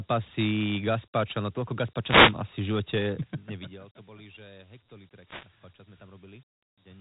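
The whole clip carries Dialogic VOX ADPCM coding: the speech is squeezed into 4-bit steps, which leaves a plainly audible gritty hiss trailing every syllable, and nothing survives above about 3.8 kHz. That band edge and grain fit a 32 kbps, 8 kHz phone-system file.

From 2.02 to 2.39 s there's a wireless microphone noise hit, where the FM radio link dipped as reflections cancelled each other and the receiver's own noise surged up. You hear it as a quick swish of static laid over the speech for about 0.37 s.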